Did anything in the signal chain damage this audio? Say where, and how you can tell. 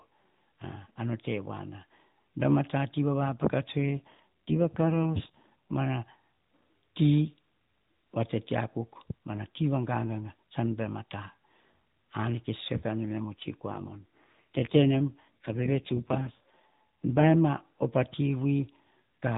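Yes, it's an AMR rate drop at the network and codec stage. Right after "a tati va vapaka", from 3.78 to 5.77 s, and again from 13.68 to 17.36 s before "op a", the speech goes buzzier and more synthetic with no gap and no band change. That fits the link pushing AMR-NB down from 12.2 to 5.9 kbps.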